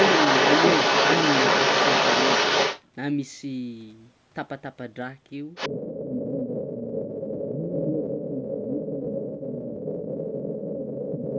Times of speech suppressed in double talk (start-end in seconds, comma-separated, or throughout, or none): 5.69-10.02, 11.15-11.38